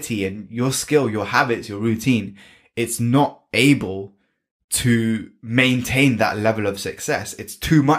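A speech recording with nothing technically wrong with it.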